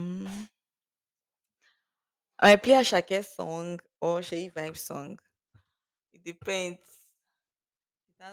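From 2.44 to 2.74 s the speech distorts harshly. This is microphone overload, likely from input gain set too high. Peaks exceed the converter limit by about 5 dB, and a few percent of samples are flattened.

At 2.91 s the whole level drops by about 5 dB in one step, voice and background together. This is the microphone volume stepped down, likely by the call software reacting to the clipping.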